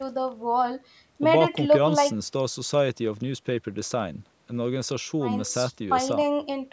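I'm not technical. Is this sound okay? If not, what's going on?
Yes, it sounds fine: the speech has simply passed through a call's microphone processing, which trims the deepest bass and tops out around 8 kHz, and that's normal for a call, not a problem.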